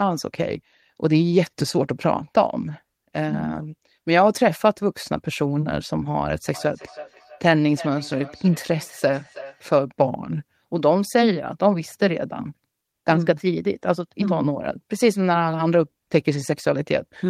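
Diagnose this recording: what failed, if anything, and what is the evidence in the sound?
Call processing failed. From 6.54 to 9.75 s, the speech comes round again as a feedback echo between two devices, repeating at a steady interval of roughly a third of a second. The repeats peak at about 18 dB below the direct speech and sound thinner than it. A second device in the same room is likely playing this call. The first microphone picks up that playback. Its echo canceller only removes its own device's output, so the copy goes out again.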